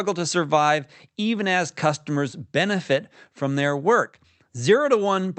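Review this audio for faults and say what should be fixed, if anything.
Nothing here needs fixing; no faults are audible.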